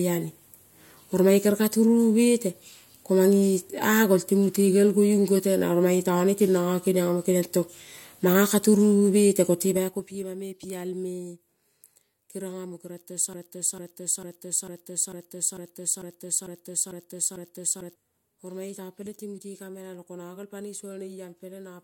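From 9.6 to 10.33 s, just before "me pialme", a drop of roughly 20 dB is applied in unsmoothed 3 dB steps, about ten a second, producing audible zipper noise. From 13.33 to 17.95 s, after "keriong amo keriong tong", a likely stalled stream resends one 0.45 s fragment ten times back to back, a broken-record loop that loses the audio meant for that span.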